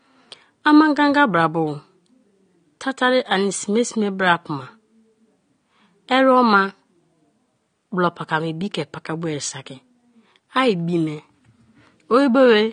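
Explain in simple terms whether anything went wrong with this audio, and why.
The speech sounds dull and smeared from start to finish, with nothing above 9.7 kHz. This is likely AAC compression: the file was squeezed hard, discarding fine detail. Unlike plain muffling, it also adds a fizzy, warbling texture.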